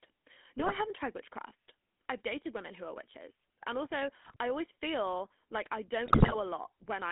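Throughout, the GSM full-rate codec gives a buzzy, gravelly voice; the spectrogram shows nothing below 250 Hz or above 3.5 kHz, with coarse, smeared harmonics. GSM bit errors at 0.58–0.79 s, 4.24–4.36 s and 6.06–6.36 s distort decoded frames into squawks and gargling pops, seen as sudden level spikes and warped spectral bands.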